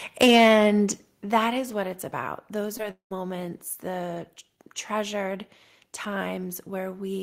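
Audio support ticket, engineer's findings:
Microphone overload, 0.21–0.65 s, before "that is what it's": harsh crackle, peaks about 7 dB over full scale, around 7% of samples clipped. Likely input gain set too high. Waveform shows flat-topped peaks; spectrogram shows broadband smearing.

Microphone volume stepped down at 0.23 s (about 3 dB) and 1.23 s (about 7 dB), the second just before "that is what it's": abrupt level drops in voice and background. Likely automatic gain control reacting to the clipping. Waveform envelope steps down cleanly.

Short concealed packet loss, 2.77–2.81 s: 20 ms missing, 15 ms synthesised from preceding audio, heard as brief smear. Spectrogram shows a short blurred patch in the harmonics.

Long network dropout, 2.91–3.13 s: 200 ms lost. Concealment extends the last sound and fades out, leaving about 110 ms of silence. Likely network outage. Spectrogram shows a fading tail, then a gap.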